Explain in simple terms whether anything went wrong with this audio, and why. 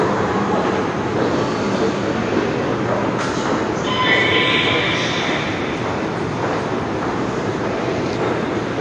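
Throughout the clip, the sound is dull and smeared, with nothing above 9.8 kHz. That points to likely AAC compression, which discards detail to save space.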